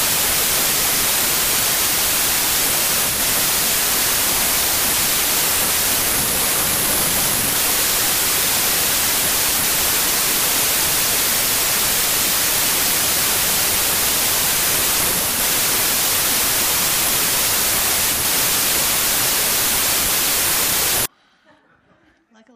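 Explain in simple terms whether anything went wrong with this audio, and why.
From the start to about 21.06 s, the audio suffers a wrong sample width fault: it was read back in smaller chunks than it was stored in, which fits 32-bit samples being read as 24-bit. The sound becomes loud noise with the original buried underneath, running at three-quarters speed and lower pitch.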